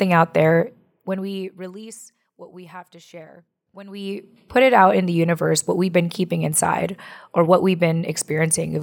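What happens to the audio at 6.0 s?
Nothing goes wrong at 6.0 s: the speech continues intact through that moment, with no dropout, click or distortion.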